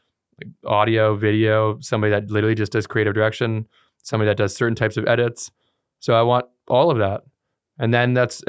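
No technical faults can be heard anywhere in the recording. The speech runs without any audible interruption or disturbance.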